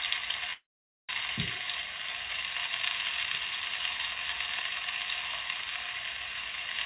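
At 0.53 s the sound stops moving forward. The last moment is drawn out as a brief fading buzz, then drops to near silence for about half a second, and the audio resumes at 1.12 s exactly where it left off, with nothing skipped. This is a call audio freeze, most likely packets delayed in transit leaving the jitter buffer empty, so the receiver stretched the final sound and then inserted a gap of roughly 0.56 s before the delayed audio arrived. Throughout, the band stops at 4 kHz, which fits a 64 kbps G.711 A-law call path.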